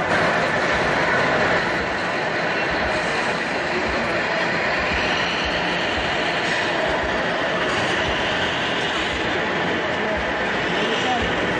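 No technical faults can be heard anywhere in the audio, with the signal holding steady and intact throughout.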